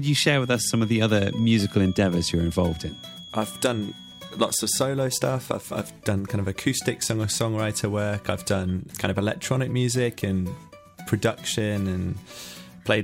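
A loudspeaker-to-microphone loop likely held at the edge of feedback from 0 to 4.95 s, leaving a faint feedback whistle near 3.3 kHz, well beneath the sound and swelling and fading slowly.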